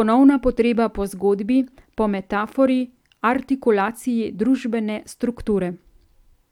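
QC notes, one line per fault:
No faults heard in this speech recording.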